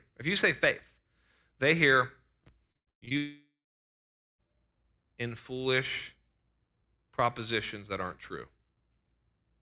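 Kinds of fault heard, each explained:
Repeated packet loss (robotic sound): From 2.72 to 3.13 s the speech turns choppy. Five short holes, the longest 110 ms, are each bridged by stretching the preceding sound, so about two thirds of that stretch is patched rather than real speech.
Long network dropout: From 3.17 to 4.49 s about 1.2 s of speech is missing. The last sound is carried on briefly as a fading buzz or hiss, then roughly 0.87 s of silence follows, likely because the incoming audio stopped, before speech resumes with that portion gone.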